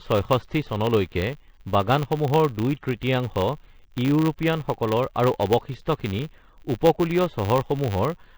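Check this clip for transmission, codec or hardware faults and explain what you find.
Three faults run through the whole of this speech clip, stacking a bright hiss, a smeared codec texture and a level-dependent buzz.

Low bit depth with noise shaping runs from start to end. The samples carry too few bits, consistent with roughly a 10-bit word length, and the rounding error is fed back so that its energy is pushed upward in frequency rather than spread evenly. The result is a constant, thin hiss sitting about 30 dB below the speech, quiet in the low range and growing sharply brighter toward the top of the band.

Generation loss is present throughout. The audio sounds swirly, hollow and smeared, with softened consonant onsets. This is likely the result of repeated lossy passes, about five MP3 encodes at a bitrate around 60 kbit/s. Each decode and re-encode quantises again on a shifted frame grid, so noise and spectral gaps accumulate beyond what a single encode at that rate would produce.

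A filter restarted on every block also affects the entire clip. The filter discards its internal state at each block boundary and begins every block as if from silence, so each block opens with a small transient. These repeat at 100 Hz, which fits 10 ms blocks, and they merge into a buzz that grows louder as the speech gets louder and drops away in pauses.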